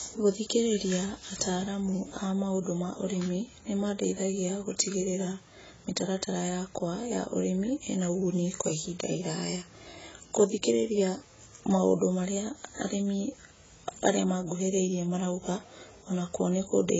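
Speech with heavy damage from likely AAC compression throughout: nothing above 7.7 kHz, and sibilants warble and fizz in a way that fits a 16 kbps bitrate, unlike plain low-pass filtering's clean dullness.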